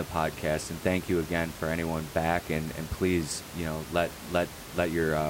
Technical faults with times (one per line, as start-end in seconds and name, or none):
none